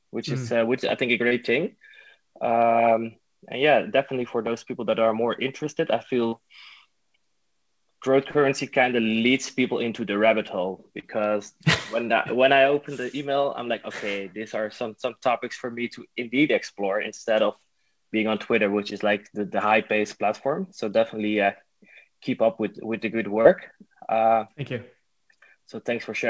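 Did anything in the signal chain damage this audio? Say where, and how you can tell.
Yes, at the network stage: short concealed packet loss at 1.28, 6.29, 11.00 and 23.41 s, each gap about 30 ms. Packets arrived too late, so the receiver extended the preceding sound and blended back, leaving brief smears or wobbles.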